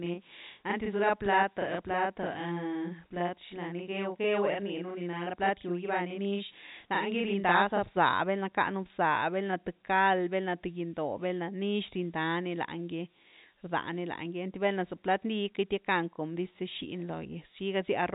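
From 0.0 to 7.97 s, channel delay doubles the speech. One channel runs 40 ms late before the mono sum, adding an equal-level slap.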